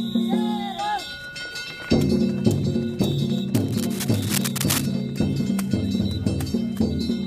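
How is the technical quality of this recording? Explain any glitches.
The recording has one clear glitch: a patch of cable scratch noise from 3.55 to 4.86 s. Dense, irregular bursts of scratching and rustling sit over the sound at a level only a little below it. The likely cause is a worn cable, connector or control being moved, so its contact resistance fluctuates rapidly. Unlike digital clicks or dropouts, which are sharp, isolated events, this noise is continuous and uneven, and it lasts over a second.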